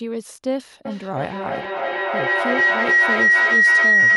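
Feedback howl takes over this speech clip from 0.85 s and runs to the very end. A tone near 2 kHz builds until it sits about 11 dB above the speech, pulsing roughly every 300 ms. Sound leaving a loudspeaker is reaching a microphone again and coming back louder each time round, so the repeats grow rather than decay and narrow onto the frequency the loop favours, with the pulsing marking the loop's delay.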